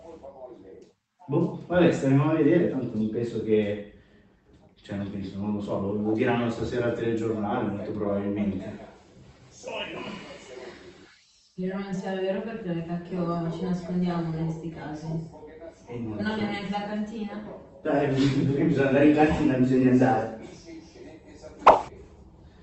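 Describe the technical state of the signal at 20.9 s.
At 20.9 s the audio is intact, with no dropout, glitch or other fault; it is simply the ordinary sound of the call path at that point.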